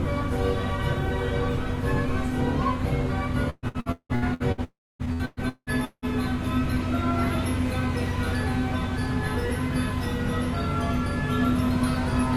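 Repeated packet loss (robotic sound) runs from 3.50 to 4.61 s. Audio packets kept arriving late or not at all, and each hole was bridged by stretching the last received sound. About 0.6 s of the 1.1 s span, over half, is this patched-in material, spread across seven gaps, the longest 178 ms. The sound turns choppy, with pieces missing between brief bursts of the real signal.

From 4.64 to 5.02 s there is a stretch where about 0.36 s of sound never plays. A short buzzy continuation of the last sound fades, and then roughly a quarter of a second of silence remains. The sound then resumes partway along, without the missing part. This is likely a long network dropout, with no packets reaching the receiver for that interval.

Repeated packet loss (robotic sound) returns from 5.05 to 6.05 s. Five more gaps, again up to 178 ms each, are filled by extending the preceding sound. About 0.55 s of the one-second stretch is concealment rather than real signal, so the same stuttering texture continues directly after the dropout.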